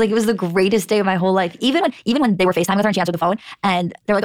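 From 1.77 s onward, a time-stretched section runs 1.92 times faster at unchanged pitch, sounding rushed, likely from software dropping short segments.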